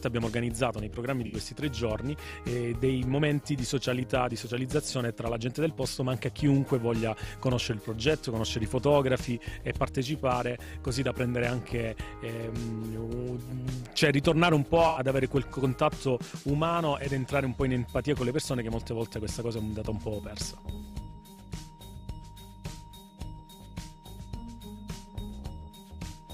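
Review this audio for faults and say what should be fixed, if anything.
A brief smeared, noisy patch is heard at 1.26 to 1.34 s and at 14.87 to 14.99 s. This is AAC frame loss with concealment: the decoder rebuilt 64 and 85 ms gaps, fitting three and four lost frames, from the last good spectrum. Retransmission or stronger error protection would prevent it.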